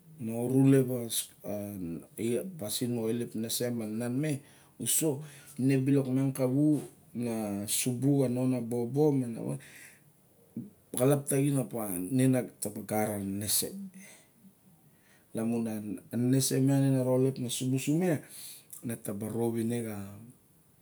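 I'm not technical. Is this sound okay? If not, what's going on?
Yes, it's fine; I can't hear any technical problems.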